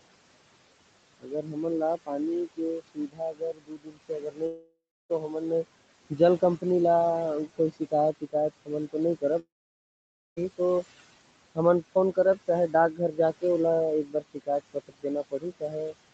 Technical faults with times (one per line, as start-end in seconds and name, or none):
0.00-16.13 noise suppressor artifacts
1.20-1.65 speech cut by the noise suppressor
2.47-5.65 speech cut by the noise suppressor
4.46-5.11 long network dropout
6.10-6.64 speech cut by the noise suppressor
7.47-11.00 speech cut by the noise suppressor
9.39-10.38 long network dropout
11.55-13.43 speech cut by the noise suppressor
14.05-15.95 speech cut by the noise suppressor